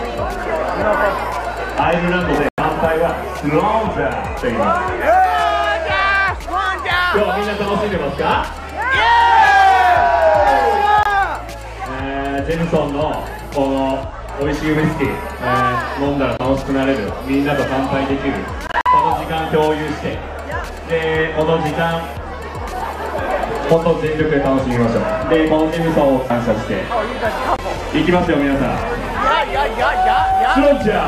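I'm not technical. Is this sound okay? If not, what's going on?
No. The sound briefly cuts to silence five times, then carries on a moment later as if it had kept playing underneath. The gaps sound like a Bluetooth dropout, where the wireless link likely failed to deliver audio in time. The longest hole runs from 2.49 to 2.59 s, about a tenth of a second. Short blips of about 23 ms come at 11.03, 16.37 and 27.56 s. From 18.67 to 18.87 s there is a stutter of small gaps.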